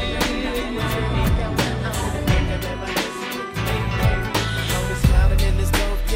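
No technical faults can be heard anywhere in this audio.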